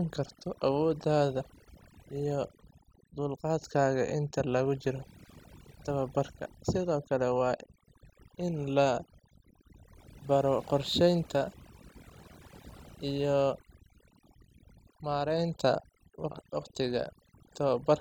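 Across the whole of the speech recording, the background falls to an unnatural near-silence dotted with twinkling specks, and the softer parts of the voice are hollowed out. That is overdone noise removal: the noise reduction was pushed so hard that any frequency band sitting close to its noise estimate was pulled far down or switched off, taking the quieter components of the voice along with the noise.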